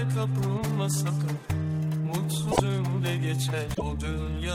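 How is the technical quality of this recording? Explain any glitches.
Two short glitches mar the recording, both damaged data in a compressed stream, at 2.49 to 2.60 s and again at 3.71 to 3.82 s, each lasting about a tenth of a second. In both spots the encoded frames arrive corrupted, so the decoder either misreads them or throws them out, drops sync, and hunts for the next valid frame header before normal playback resumes. To the ear, each one comes through as a brief chirp, squawk, click or short hole cutting across the sound.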